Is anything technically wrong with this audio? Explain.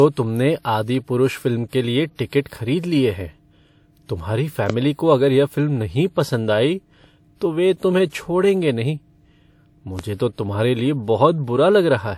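Yes. Throughout, the audio was likely encoded twice: first to MP3, then re-encoded to WMA, which is transcoding between lossy codecs. The second encoder wastes bits on the first one's artefacts and adds its own, so both kinds of smearing are heard together, with nothing above 19.6 kHz. The sound suggests a fairly high MP3 rate followed by a more modest WMA one.

A loud pop occurs at 4.70 to 4.72 s, just before "को अगर यह फ़िल्म", and another at 9.99 to 10.01 s, just before "तो तुम्हारे लिए". Each was likely a sudden voltage step, such as a switch, static or driver glitch, shaped by the following circuitry. Each is heard as a single sharp pop, about 15 dB and about 10 dB above the speech respectively, while the speech continues underneath.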